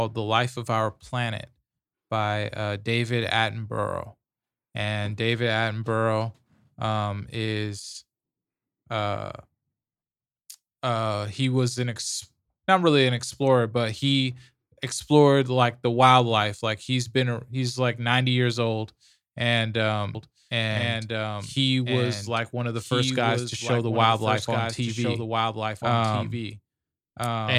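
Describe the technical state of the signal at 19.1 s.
At 19.1 s the speech signal is intact, with no fault present.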